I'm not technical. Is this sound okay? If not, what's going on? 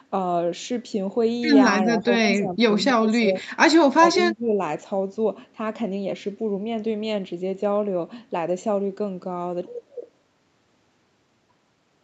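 No. Speech suppressed in double talk around 1.86 to 3.33, 3.52 to 3.58 and 3.90 to 4.52 s: the voice dips or drops out, likely because the call's echo control turned it down while the other side talked.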